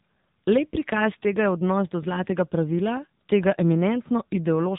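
Throughout, AMR narrowband mobile codec damage makes the speech buzzy and synthetic, consistent with a low AMR-NB mode near 7.95 kbps. A spectrogram shows everything above 3.8 kHz completely empty.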